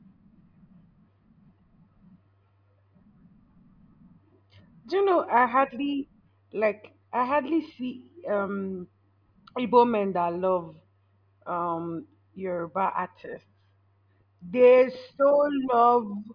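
No technical faults are audible.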